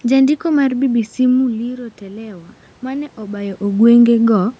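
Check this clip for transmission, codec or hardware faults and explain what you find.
One fault stands out, a gain-control swell rather than a codec or hardware problem. From 0.91 s to 3.69 s the voice and the room noise behind it slowly grow louder together. This is automatic gain rising. Around 1 s the talker drops away from the microphone, leaving the input about 12 dB quieter. The gain control reacts by lifting its gain gradually, by about 4 dB over nearly three seconds, so the background swells along with the speech until the talker moves again near 3.5 s.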